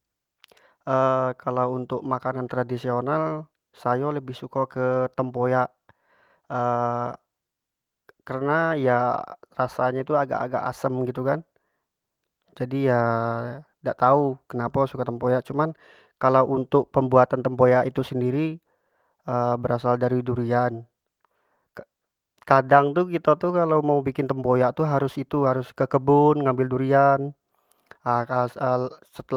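Speech recording, nothing technically wrong with it: no faults to time or trace to a cause.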